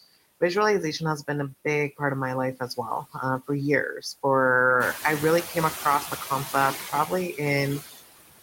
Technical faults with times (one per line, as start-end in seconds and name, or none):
0.00-8.42 noise suppressor artifacts